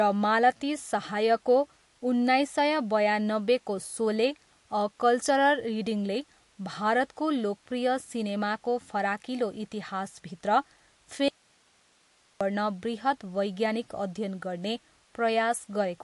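From the start, the treble stops near 11.3 kHz, and the speech sounds watery and swirly. This is likely MP3 compression, fitting a bitrate near 50 kbps. At 11.28 s the voice cuts out abruptly. Only hiss remains, roughly 40 dB down, until 12.41 s, just before "गर्न बृहत् वैज्ञानिक". This is an audio dropout to a faint residue, likely a lost signal on a live path.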